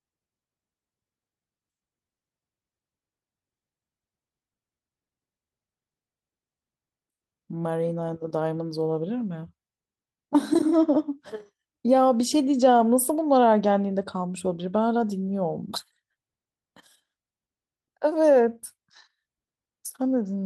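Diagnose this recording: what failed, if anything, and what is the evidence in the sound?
Nothing failed here, as far as I can hear: the speech comes through the whole way with no dropouts, clicks, glitches or other breakdowns that would point to trouble anywhere in the chain.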